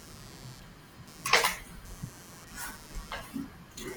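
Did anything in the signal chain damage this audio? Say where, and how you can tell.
Yes, in the analogue wiring: computer activity noise. Processor and graphics load currents modulate the ground shared with the audio circuit, so a buzzing, chirping layer pulsing at roughly 150 Hz, about 20 dB below the speech, runs throughout, following machine activity rather than the speech.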